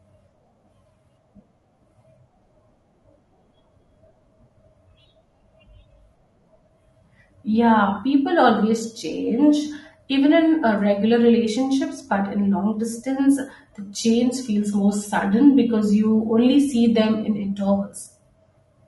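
Low-delay AAC compression runs throughout: the speech sounds rough and grainy with noise between harmonics, likely AAC-ELD's short frames starved of bits near 32 kbps.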